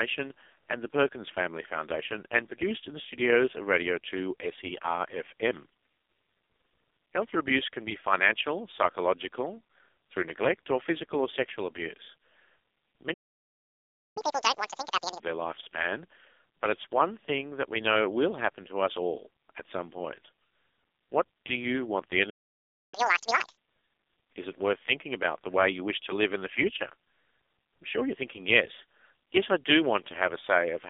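AMR narrowband mobile codec damage runs through the whole speech clip. The sound is squeezed into a telephone band of about 300 Hz to 3.6 kHz with nothing above 3.6 kHz. The heavy buzzy, synthetic quality points to a very low bitrate, around 5 kbps.

A playback stall at 13.13 s silences the audio for 1.02 s until 14.17 s, most likely because the player ran out of buffered data. Speech cuts off mid-flow and resumes after the gap.

Catch-up at higher speed follows from 14.17 to 15.20 s. The player runs its backlog at 2× speed, so the speech rushes and jumps up roughly ten semitones before settling back to normal.

A second playback stall at 22.30 s mutes the sound for 0.63 s, to 22.94 s. It is likely another buffer underrun, heard as an abrupt break before playback continues where it stopped.

A second catch-up at higher speed runs from 22.94 to 23.57 s. Playback is again doubled to recover the lost time, giving the same hurried, high-pitched sound, roughly ten semitones up, before normal speed returns.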